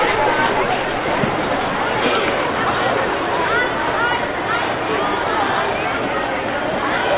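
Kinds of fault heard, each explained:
No faults can be heard anywhere in this recording.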